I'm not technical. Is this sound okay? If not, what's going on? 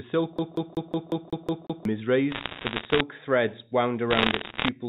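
No. A CD stuck on one turn affects 0.38 to 1.85 s. A scratch keeps throwing the player back to the same spot, so a slice of speech about 0.18 s long repeats eight times in a quick, even stutter, with a tiny gap at each jump.

Bit errors on a digital phone line come next, from 2.31 to 3.01 s and again from 4.11 to 4.68 s. Along the telephone connection a small share of the digital data got flipped, and flips in the most important pieces turn into sharp ticks, so these stretches crackle over the speech.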